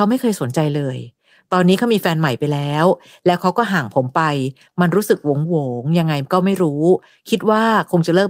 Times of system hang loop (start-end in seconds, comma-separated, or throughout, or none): none